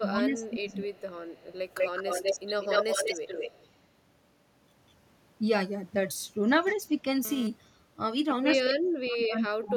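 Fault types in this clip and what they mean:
Speech suppressed in double talk: The echo canceller likely mistook overlapping talk for loudspeaker echo and pulled the level down. The speech dips or breaks into pieces from the start to 0.86 s, by roughly 20 dB at its deepest, and again from 8.61 s to the end, where drops reach roughly 35 dB. About three quarters of a second and then about a full second of speech are affected.
Echo leak: A loudspeaker-side echo canceller likely left part of its microphone pickup unremoved and sent it back as a delayed copy of the speech. Faint scraps, about 30 to 35 dB down, trail by 244 ms at 0.41–0.50 s and 0.72–0.76 s. A 197 ms echo then runs from 0.92 to 3.67 s at about 5 dB below the speech. It returns at near equal level at 8.54–8.74 s and about 10 dB down at 9.69–9.73 s.
GSM phone buzz: A nearby 2G phone transmitting bursts about 217 times a second had its radio pulses rectified by the audio circuitry. 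The result is a hard, raspy 217 Hz buzz rich in harmonics that bears no relation to the speech, sitting about 14 dB below the signal. Because the phone was moving data, the buzz arrives as an intermittent stretch from 6.67 to 7.47 s.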